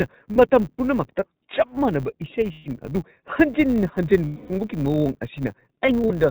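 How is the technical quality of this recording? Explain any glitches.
The technical quality is poor. Three faults are audible in this speech recording.

Throughout, the iLBC codec band-limits the audio to 4 kHz and gives it a plainly rough, synthetic texture. This fits 20 ms frames at about 15 kbps.

A filter restarted on every block leaves a faint transient at each boundary. Together these form a steady 100 Hz buzz that rises and falls with the speech level.

Lost iLBC frames occur at four points:
0.32–0.36 s (40 ms)
2.52–2.68 s (140 ms)
4.24–4.51 s (260 ms)
5.86–6.12 s (about 80 ms in short scattered dropouts)

In each, the decoder repeats the last pitch cycle mixed with noise, producing a held, buzzy vowel that fades over the longer gaps before clean recovery.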